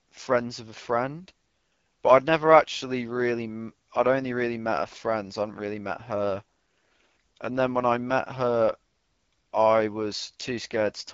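The speech in this clip has been passed through the AMR wideband (HD Voice) codec at one of its lowest rates, and the coarseness points to roughly 8.85 kbit/s, so the speech model runs short of bits throughout. The voice turns plainly rough and raspy, with nothing above 7.5 kHz.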